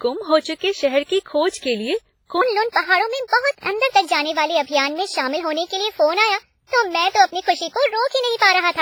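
It's a speech clip, and the whole thing has heavy smeary, ringing codec wash with hiss pumping along with the voice, likely WMA compression at a low bitrate around 24 kbps. From 2.41 s to the end there's a section at the wrong speed, running 1.31 times fast and about five semitones high, likely played against the wrong clock.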